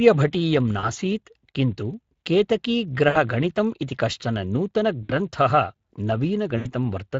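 From the first second to the last, the speech carries plainly audible Speex codec damage: a hoarse, grainy CELP texture whose upper band is a noise-like fill rather than real detail, which fits a rate of roughly 20 kbps. This sounds different from an MP3-style codec's swirling artefacts.

On top of that, there are four bursts of VoIP packet loss concealed by the speech codec, at 0.79–0.88 s, 3.09–3.17 s, 5.03–5.12 s and 6.57–6.72 s, covering about 40, 60, 60 and 80 ms of lost audio. In each, the decoder stretches the last sound into a fading buzzy tone or coloured noise, and the sound stays weak briefly afterwards. Unlike a plain dropout, there is no silent gap or click.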